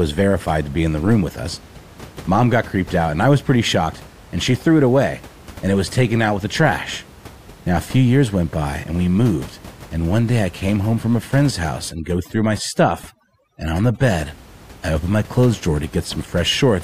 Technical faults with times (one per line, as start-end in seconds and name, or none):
11.91-14.14 overdone noise removal